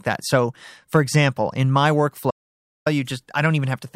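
At 2.31 s, right after "for example in my", the speech drops out to silence until 2.86 s, losing about 0.55 s of audio. This audio dropout to silence is complete, with no room tone, and the speech resumes abruptly mid-flow. The likely cause is a lost input while the recorder kept writing zeros. On the waveform the trace collapses to a flat line; the spectrogram shows a fully blank vertical band.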